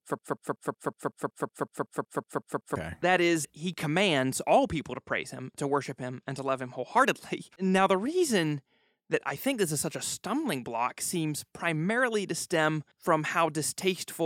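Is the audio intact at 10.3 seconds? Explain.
Yes, at 10.3 seconds the speech runs through intact, with no dropout, click, distortion or other fault at that moment.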